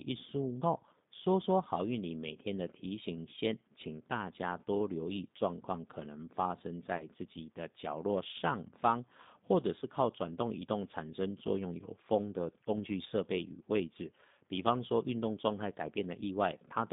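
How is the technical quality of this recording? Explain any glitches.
The recording has narrowband telephone quality with two short dropouts. Throughout, the speech carries G.729 codec coloration: the band is limited to roughly 150 Hz to 3.7 kHz, consistent with 8 kbit/s G.729A. The decoder resynthesises speech from a vocal tract filter, pitch predictor and sparse pulses, so the voice sounds plainly rough, slightly synthetic and dull.

At 6.97 to 7.06 s and again at 9.79 to 9.84 s, there is VoIP packet loss concealed by the speech codec. About 30 ms of audio is missing each time, which fits one lost packet. The decoder extends its last pitch and filter state at falling gain, giving a brief buzzy tone or coloured noise that fades before normal speech recovers.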